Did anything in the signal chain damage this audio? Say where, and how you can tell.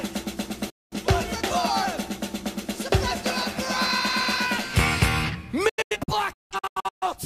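Yes. Digital broadcast dropouts at the reception and decoding stage: the receiver lost valid frames and muted until good ones returned. The sound fades out over about 8 ms at 0.70 s and returns at 0.97 s, a clean hole of 213 ms that fits five lost frames. From 5.69 to 7.07 s it breaks into several short holes with the same quick fades, totalling 683 ms of missing audio, the longest 171 ms. Whatever was broadcast during those gaps is gone.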